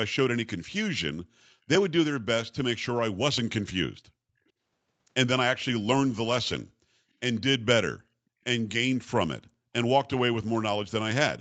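From 1.2 to 1.4 s, and again from 8.26 to 8.4 s, the background is gated by the echo canceller. It clamps the microphone down by about 40 dB for a fraction of a second, so room tone abruptly vanishes and returns. On a waveform and spectrogram, the noise floor collapses into a short, sharp-edged gap.

At 3.95 to 4.0 s and 9.45 to 9.49 s, a brief, very faint scrap of earlier speech resurfaces about 452 ms after the original, roughly 35 to 40 dB below the main voice. This is likely an echo leak, where residual loudspeaker pickup slips past the canceller. The spectrogram shows it as a faint, delayed ghost of preceding speech.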